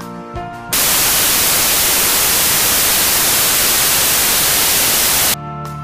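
Samples built from the wrong bytes, from 0.73 s to 5.34 s: the audio turns into loud, harsh broadband noise because each sample's bytes are combined in the wrong order or alignment, so the rapidly changing low bits dominate every value.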